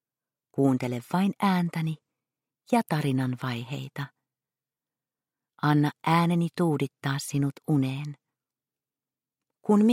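No technical faults can be heard anywhere in the clip.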